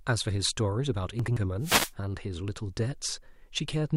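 At 1.20 to 1.37 s there are chunks out of order: two consecutive blocks of about 85 ms each play in swapped sequence, with the later block arriving first. One chunk was delivered or written a single slot late, so no audio is lost, but the speech jumps forward and then back. The three hard joins, at the start, the swap point and the end, surround a brief jumbled stretch.

From 1.60 to 1.93 s a wireless microphone noise hit occurs. The RF carrier of an analogue FM link dropped as multipath reflections cancelled at the receiver antenna, and the receiver's noise floor rose as the signal weakened. In this clip that appears as a swish of static lasting about a third of a second that rises before the signal recovers and the noise falls away.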